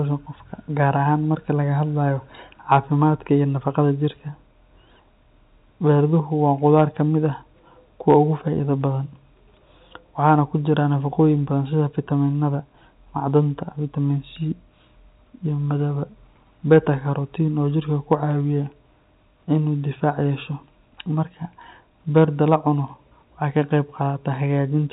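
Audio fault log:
8.10–8.18 s and 18.12 s, hard clipping: peaks drove a stage about 2 dB past its maximum level, cutting the waveform tops flat. The flattened tops add harmonics high up the spectrum, heard as a short crackle over the narrow G.711 telephone-band sound.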